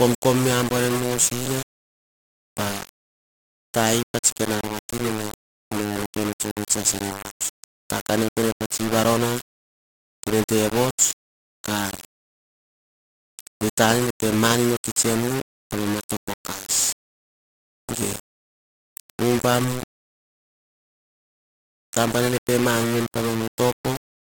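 This speech clip was most likely requantized to low bit depth without dither, rounding to what sounds like about 5 bits. The error tracks the signal, so every syllable carries grainy, signal-following distortion only around 10 dB down, and quiet stretches sputter or drop out, throughout.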